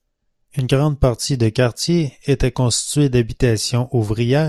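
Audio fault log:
0.59–2.58 s, periodic USB or driver dropouts: three evenly spaced ticks one second apart, where a sliver of speech well under a millisecond is replaced by silence, likely from a driver stall. The waveform shows hairline flat gaps, and the spectrogram shows thin vertical broadband lines.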